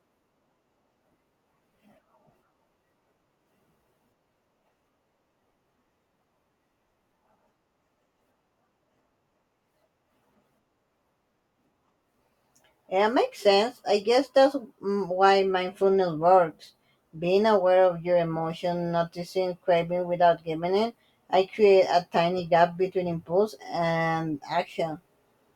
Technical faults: none

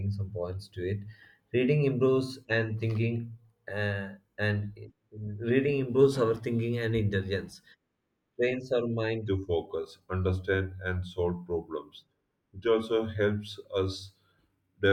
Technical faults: section at the wrong speed

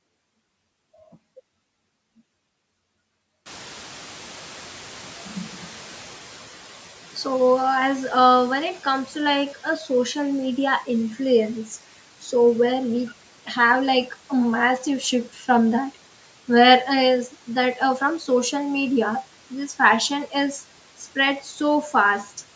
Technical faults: noise suppressor catching up; speech cut by the noise suppressor

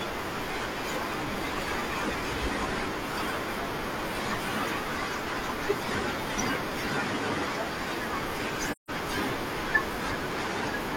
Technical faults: AAC frame loss with muting

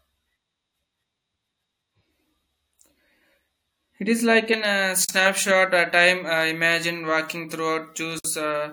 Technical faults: pre-emphasis left on; gap at a join of encoded pieces

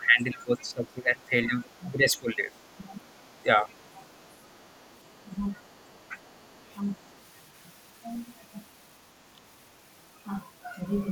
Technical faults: speech suppressed in double talk; other side's voice leaking through

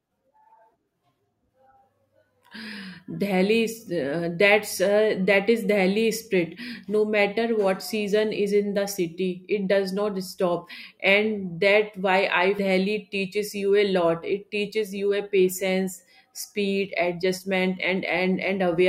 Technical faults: damaged data in a compressed stream

